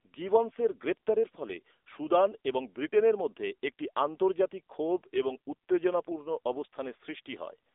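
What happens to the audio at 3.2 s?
At 3.2 s the speech is still carrying the AMR narrowband mobile codec damage that runs through the whole clip. The sound is squeezed into a telephone band of roughly 300 Hz to 3.6 kHz and rebuilt from a vocal-tract model fed by sparse pulses, so it sounds buzzy and synthetic, which fits a low AMR mode near 8 kbps. On a spectrogram, energy stops at a flat ceiling near 3.8 kHz with blank space above, and the region below 300 Hz is thin.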